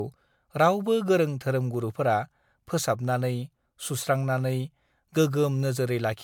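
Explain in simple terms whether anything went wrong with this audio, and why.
The speech sounds swirly, hollow and smeared throughout, with blurred consonants: that's generation loss, likely from being re-saved as MP3 around seven times.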